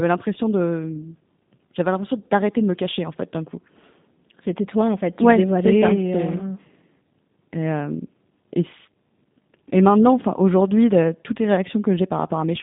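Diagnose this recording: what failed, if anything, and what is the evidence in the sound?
The codec stage is the culprit: this speech has been through G.729, probably the 8 kbit/s A variant judging by the sound. The band sits at roughly 150 Hz to 3.7 kHz, with nothing above 3.7 kHz, and the speech sounds plainly rough and synthetic because the decoder rebuilds it from a filter, a pitch predictor and sparse pulses.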